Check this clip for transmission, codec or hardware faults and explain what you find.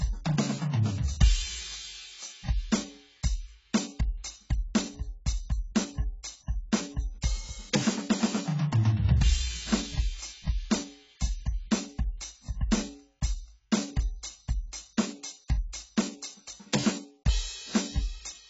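The music sounds dull and smeared from start to finish, with nothing above 7.7 kHz and a warbling, fizzy texture on sustained tones. This is likely AAC compression: heavy quantisation leaves holes in the spectrum, which fits AAC-LC at around 16 kbps.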